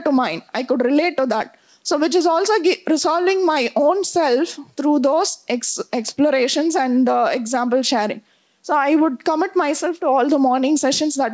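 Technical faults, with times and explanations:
No technical faults are present in the audio.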